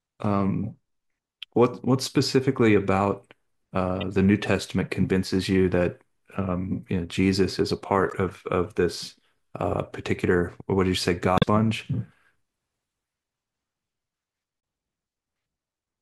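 Damaged data in a compressed stream disrupts this speech at 1.53–1.56 s, 4.01–4.03 s, 8.09–8.13 s, 11.35–11.44 s and 14.60–14.63 s. Each event lasts 20 to 82 ms, the longest being the one near 11.4 s. At each point, corrupted bytes in the encoded file cause the decoder to misread frames and lose sync while it hunts for the next valid frame header, producing a brief disruption such as a chirp, click or short hole in the audio.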